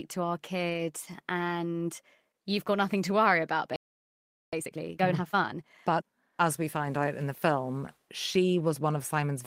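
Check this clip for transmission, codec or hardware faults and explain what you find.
Three faults are audible in this speech clip.

Lost packet rebuilt from error correction, 0.69 to 0.79 s, just after "to our": three separate packets went missing, and the decoder filled about 60 ms from the low-bitrate copies carried in the following packets. There is no gap, but that stretch sounds coarser and noisier.

Playback stall, 3.76 to 4.53 s, right after "nothing to worry about": the player likely ran dry of buffered data or had its output thread blocked, so the sound cuts off mid-flow and stays silent for about 0.77 s before resuming.

Time-compressed catch-up, 4.53 to 6.05 s, running up to "as we find out": to work off the backlog from the stall, the player trims and cross-fades short slices, playing at about 1.5 times normal speed. The speech sounds rushed but stays at its normal pitch.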